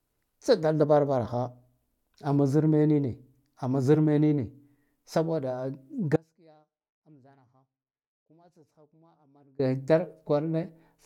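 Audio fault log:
6.16–9.59 s, audio dropout to a faint residue: speech cuts abruptly for 3.4 s, leaving faint sound about 30 dB down, likely a live path after a signal break, not a fade.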